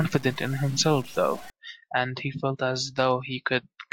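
From the start to 1.5 s the speech turns grainy, with distortion that tracks the sound and roughly 20 dB below it, likely low bit depth without dither, consistent with 6-bit truncation. Unlike dithered noise, it is no steady hiss and vanishes in silence.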